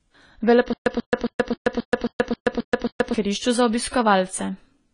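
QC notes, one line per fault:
Throughout: AAC compression. The spectrum stops at about 10 kHz and the codec damage is plainly audible, so the speech sounds dull and band-limited, with the smeared, unstable texture of coarse quantisation against a hearing model. The artefacts point to AAC-LC at a low bitrate, which fits roughly 24 kbps, and that is the likely cause. At that rate the encoder lowers its cut-off and spends too few bits on the remaining bands.
0.73–3.14 s: stutter with silent gaps. A 138 ms fragment of audio is played over and over, with a 129 ms silent gap after each pass. The cycle repeats every 267 ms and the fragment occurs 9 times in all. This even, mechanical rhythm likely comes from a stalled player or stream that replayed its last buffered fragment at each retry and then ran empty. The programme audio for this span is lost.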